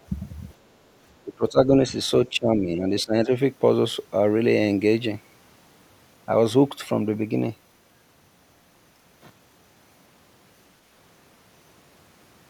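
A speech recording with two echo-related faults. At 0.50 to 0.54 s the other side's voice is leaking through: a brief, very faint scrap, roughly 40 dB below the talker, most likely loudspeaker echo the canceller left behind. On a spectrogram it is a dim, short smear of harmonics. Speech is suppressed in double talk at 1.24 to 1.92 s, 2.29 to 2.85 s and 3.03 to 3.30 s. The talker's level dips by up to around 15 dB, likely because the echo canceller turned everything down while both sides spoke. The waveform shows notched, sagging envelopes there, and the spectrogram shows darkened bands.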